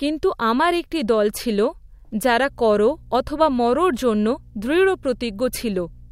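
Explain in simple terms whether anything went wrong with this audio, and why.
Something did go wrong: the recording picked up mains hum. Partway through, electricity from the power supply leaked into the audio path, most likely through a ground loop or a nearby transformer. From about 2.46 seconds to the end of the speech clip, a steady low buzz at 60 Hz sits underneath everything. It stays fairly quiet next to the speech but never stops, like the drone of an appliance in the same room.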